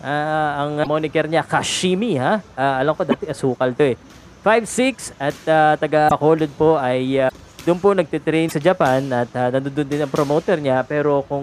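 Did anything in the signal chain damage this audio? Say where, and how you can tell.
Yes. Brief glitches, about 40 ms each, interrupt the sound at 0.82, 3.10, 6.08, 7.28 and 8.48 s, each with a skip forward. This is likely a broken MP3 bit reservoir at the codec or storage stage: after dropped frames of about 26 ms, the decoder reads reservoir bytes from the wrong frame.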